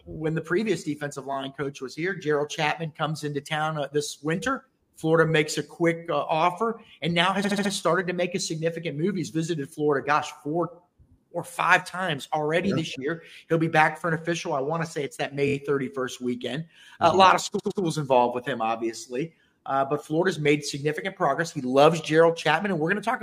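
Brief stutters at 1.33, 7.43, 15.47 and 17.58 s replay blocks of 23, 70, 23 and 116 ms. This is a repeated frames fault: compressed frames were sent or written more than once and decoded again.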